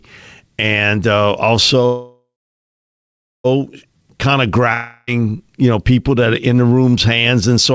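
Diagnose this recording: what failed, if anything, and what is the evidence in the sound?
Call audio freeze, 1.86 to 3.46 s. The sound fades to silence, then resumes with nothing missing. Stalled network packets likely emptied the jitter buffer.

Long network dropout, 4.74 to 5.09 s. A fading buzz fills the gap. About 0.34 s of speech never returns, likely lost in the network.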